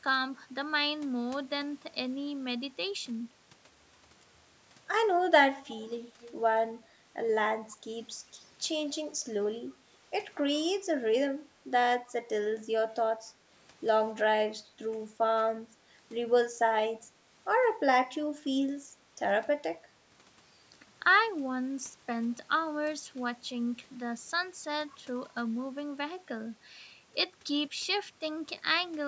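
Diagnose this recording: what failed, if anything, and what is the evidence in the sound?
Faint, delayed copies of the speech surface at 5.67–6.03 s and 6.20–6.34 s, roughly 20 dB below the talker, then fainter scraps at 7.70–7.75 s and 9.14–9.18 s, all trailing by 268 ms. This is echo leak in call processing, likely loudspeaker sound the echo canceller failed to remove.

At 18.94–19.06 s the speech briefly dips, by around 15 dB at its deepest, for about a tenth of a second. This is speech suppressed in double talk, likely the echo canceller attenuating the near talker while both sides spoke at once.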